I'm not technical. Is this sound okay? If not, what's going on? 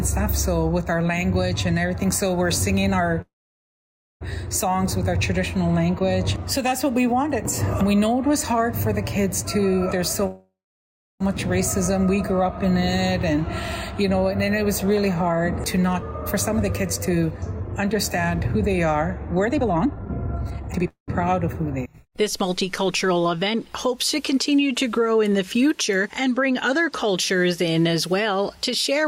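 No. There are two kinds of problem, both typical of a shaky internet call.

The first is a call audio freeze, at 3.21–4.23 s, 10.27–11.22 s and 20.88–21.10 s. The sound stalls and a short fading buzz trails off into near silence, lasting about a second in the first two and a fifth of a second in the last. The likely cause is late-arriving data. Unlike a dropout, nothing is lost: the audio picks up exactly where it stopped, just later.

The second is a jitter buffer speed-up, which happens after the stall has left the call running behind. From 15.33 to 16.03 s the audio plays 6% fast, trimming about a twentieth of a second. From 16.59 to 20.88 s it plays 30% fast, trimming around a second and a half. The pitch stays the same, so it sounds hurried rather than squeaky like a fast-forwarded tape.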